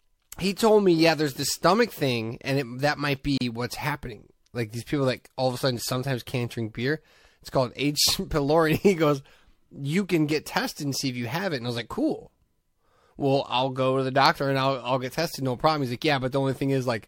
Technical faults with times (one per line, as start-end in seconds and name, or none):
3.38-3.41 gap at a join of encoded pieces